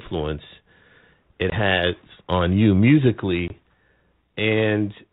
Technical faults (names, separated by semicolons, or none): packet loss on an ADPCM call